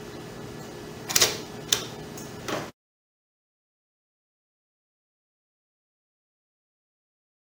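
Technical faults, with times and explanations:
Throughout, imaging from sample-and-hold upsampling: samples repeated without smoothing leave a mirror spectrum at 11.03 to 22.05 kHz, about -9 dB, heard as metallic fizz following the sound.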